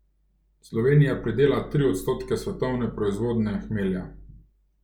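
No technical faults are audible in this recording.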